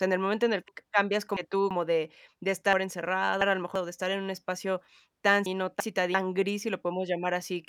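A speech clip in which chunks play out of order three times. Blocks of roughly 341 ms arrive late and are slotted in behind later audio: two chunks late at 0.68–1.71 s and 2.73–3.76 s, one chunk late at 5.46–6.14 s. Each spot sounds jumbled, with hard joins.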